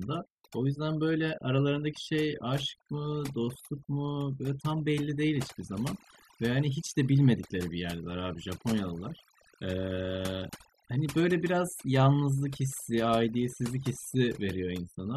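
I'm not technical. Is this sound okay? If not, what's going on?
No. The speech has overdone noise removal all the way through. A noise reduction tool was pushed too hard while cleaning up a noisy recording, so it shut off any sliver of sound it mistook for background noise, including the softer parts of the voice. The result is a background that drops and breaks up into twinkling, warbling specks.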